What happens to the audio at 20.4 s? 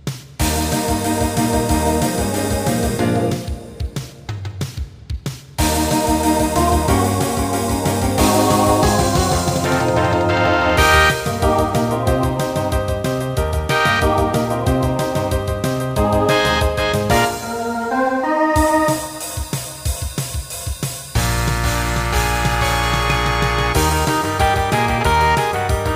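Nothing goes wrong at 20.4 s: the audio plays through that moment intact, with no dropout, click, glitch or other fault.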